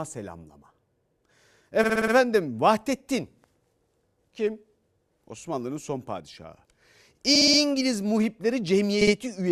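Repeated frames at 1.83–2.13 s, 7.35–7.59 s and 9.01–9.14 s: a 60 ms stretch of speech replays five, four, then two extra times. Unlike a dropout, nothing is lost; the stutter adds time.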